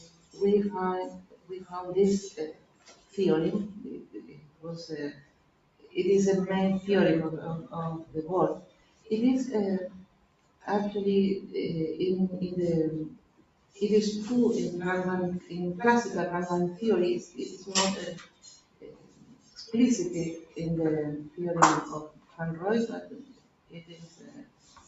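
A noise suppressor built for speech stays switched on for the whole clip, treating steady tones, ambience and decaying tails as noise. It keeps raising and lowering its gain over a range of around 20 dB, so sudden attacks pass while held sound sinks beneath them, giving a pumping, fluttering and thinned character throughout. The call path's 8 kHz bandwidth, with nothing above 8 kHz, can be heard alongside this as a dulled top end.

The sound cut by the noise suppressor shows up in four stretches. From 0.00 to 5.96 s, the suppressor pulls sustained material down for roughly three seconds in total, by as much as about 17 dB, so tails vanish early and the level dips between onsets. The same happens from 7.62 to 10.67 s for about a second and a half, and again briefly from 13.10 to 13.78 s, under a second. From 17.25 s to the end at 24.88 s, decays are again cut short and held sound drops away, by up to about 17 dB.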